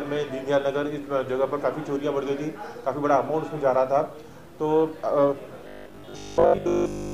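From 5.68 s to the end of the clip, the sound turns into a rigid, metallic buzz at 50 Hz. This is robotic sound from repeated short buffers, likely caused by new audio arriving too rarely, so the playback side loops the last 20 ms to fill the gap. Most of the real audio in that stretch is skipped, and the fixed loop length imposes the 50 Hz tone, while the overall contour of the sound still comes through roughly.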